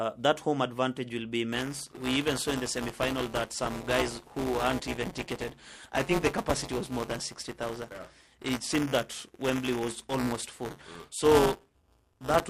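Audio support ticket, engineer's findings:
Buffer tearing from 1.52 s, after "home advantage will be", to the end. Writer and reader cross mid-buffer, splicing roughly a tenth of each period from about 10 ms earlier. Robotic 188 Hz buzz fits a 256-sample buffer.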